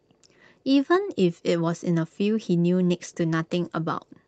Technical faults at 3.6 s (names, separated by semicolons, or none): call bitrate drop